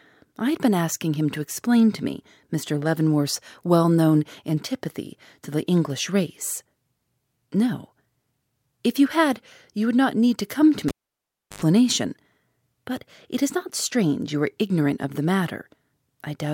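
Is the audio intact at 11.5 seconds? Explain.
No. From 10.88 to 11.62 s a cable is pulled and plugged in while live. A pop marks the break, then about 0.69 s of near silence, so 11.5 s falls inside the break. An 86 ms burst of 50 Hz mains buzz follows as only the plug tip makes contact, and a second pop brings the sound back. A waveform shows two sharp spikes around a flat line. A spectrogram shows vertical broadband streaks, a dark gap, and a brief horizontal band at 50 Hz.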